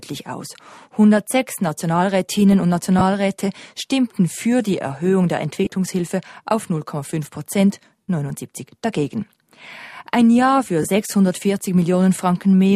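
Lost LE Audio frames cause four short dropouts. At 2.99 to 3.01 s, about 22.5 ms of sound is missing. From 5.64 to 5.72 s, 45 ms is lost in scattered gaps, the longest around 20 ms. At 8.02 to 8.08 s, 67.5 ms goes. At 10.83 s, 15 ms drops. The decoder fills each gap by repeating the last spectrum with random signs, which fits lost 7.5 ms frames. Tones smear into brief noisy hiss, and the longest gap fades toward silence.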